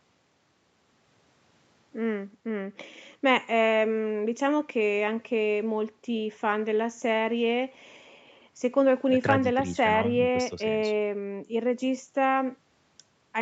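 No faults found; the speech is band-limited to about 8 kHz by the call microphone processing and the WebRTC call path, as expected for a wideband call codec.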